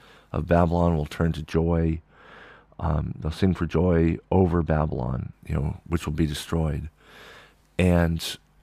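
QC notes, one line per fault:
1.53–5.33 s, de-emphasis applied wrongly: the speech turns dull and muffled, with the top end rolling off smoothly to about 13 dB down at 10 kHz relative to 1 kHz. A treble-cut curve meant to undo pre-emphasis was applied where there was none to undo, or applied twice, so the highs are turned down. Unlike a low-pass filter, there is no abrupt cutoff: the slope is gentle and continuous.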